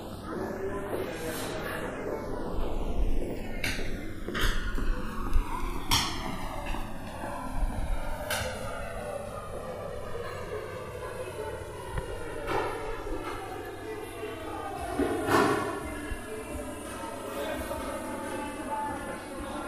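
A slow, sweeping flange runs through the whole clip, with hollow notches gliding steadily through the spectrum whenever the two sides combine. This is channels drifting apart: the left and right signals were captured on devices running from separate clocks, mismatched by something like 200 parts per million. The offset between them keeps growing, reaching roughly 4 ms by the end, so the comb filtering created when they sum keeps shifting position.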